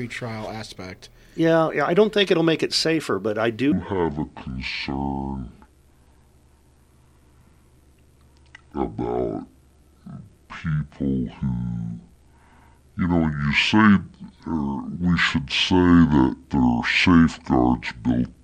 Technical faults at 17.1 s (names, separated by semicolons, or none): section at the wrong speed